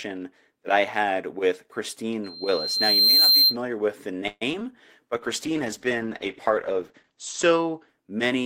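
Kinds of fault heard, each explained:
Loudspeaker feedback squeal: A 4.2 kHz tone swells over about a second to roughly 10 dB above the speech, from 2.24 to 3.57 s, as the microphone re-amplifies its own loudspeaker.
Call audio freeze: At 4.27 s the sound hangs and fades for about 0.14 s, then resumes intact, likely because delayed packets let the jitter buffer run empty.
Short concealed packet loss: Two brief smears at 4.53 s and 4.59 to 4.62 s, where about 20 ms of audio each time was lost and patched over.
Call bitrate drop: From 5.16 s to the end the speech turns rough and muffled, as the encoder falls from 32 to 10 kbps and bandwidth narrows from 20 to 8 kHz.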